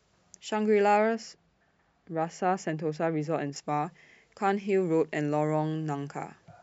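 From 1.15 to 3.56 s, de-emphasis is applied wrongly: a treble-cutting filter meant to reverse pre-emphasis acts on speech that either never had that boost or had already been de-emphasized. The high end falls away gradually, down about 14 dB at 10 kHz relative to 1 kHz, so the passage turns dull and muffled.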